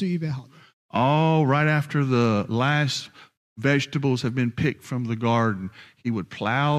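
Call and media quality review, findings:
No audible faults found in this speech recording.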